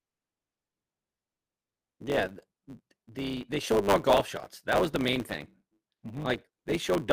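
Throughout, one stage writes longer blocks than the next stage reads, so each block's tail is discarded. This is a block size mismatch (truncated), consistent with 512-sample blocks. The speech carries a 100 Hz buzz and runs 1.07 times fast at near-normal pitch.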